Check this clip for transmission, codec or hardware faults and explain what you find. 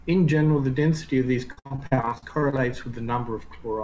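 There is one transmission fault: repeated packet loss with robotic sound, from 1.52 s to 2.59 s. Over that stretch the audio keeps breaking up. More than a dozen short holes appear, the longest about 59 ms, and roughly a third of the span is filled in. Each time audio fails to arrive, the receiver extends the last piece of sound to cover the hole. Because the holes come close together, the extensions pile up into a choppy texture with fragments missing. A single dropout would leave one gap and then recover. Here the concealment repeats steadily for about a second, and that repetition is what makes it sound robotic rather than like one glitch. The surrounding call audio has no content above 8 kHz, which fits a wideband call codec such as G.722.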